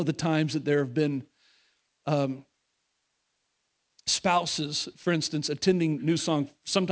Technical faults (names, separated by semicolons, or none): aliasing